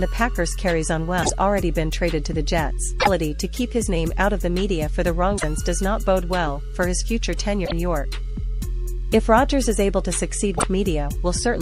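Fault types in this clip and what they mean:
Damaged data in a compressed stream: at 1.19–1.30, 2.97–3.08, 5.34–5.44, 7.62–7.72 and 10.54–10.64 s, five bursts of about 0.1 s each break up the sound. Each time, a stretch of the encoded stream is corrupt, so the decoder misreads those frames, loses its place and hunts for the next valid frame header. The result is a brief chirp, squawk, click or short hole in place of the intended audio.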